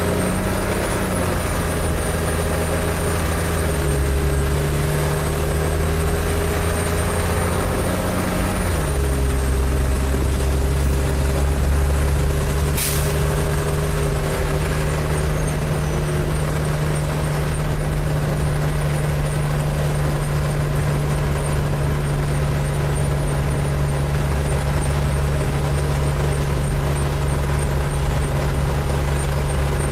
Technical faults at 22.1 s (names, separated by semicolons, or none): none